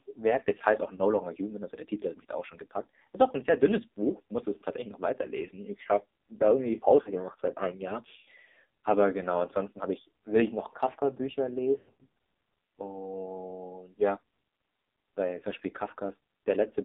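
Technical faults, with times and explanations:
Throughout: AMR narrowband mobile codec. The speech was coded by the AMR-NB mobile codec in a heavily damaged, low-rate mode, which fits a bitrate of about 6 kbps. Only about 250 Hz to 3.7 kHz survives, so the speech sounds thin and telephone-like. With so few pulses available to drive the vocal tract model, the voice is left buzzy and synthetic.
0.96–1.00 s: lost AMR speech frames. A frame failed its checksum, and the decoder repeated the last good settings at lower gain, causing a brief dip or warble that fits a single 20 ms loss.
7.02–7.11 s: lost AMR speech frames. About 40 ms went missing, which fits two frames, so the concealment holds the sound slightly longer before the speech resumes.
11.78–12.06 s: lost AMR speech frames. About 220 ms of losses are scattered over 280 ms, with a longest run of 100 ms. The speech smears, fades toward silence, and returns rough.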